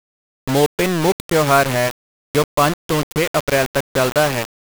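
Throughout the speech, the signal has most likely been reduced to a very low bit depth without dither. The sound points to about 3 bits, with each sample rounded to the nearest of a handful of levels. Because no dither was added, the rounding error tracks the signal, leaving grainy distortion only about 10 dB below it. That grit shifts with every change in the speech, and quieter stretches sputter or drop out entirely between steps.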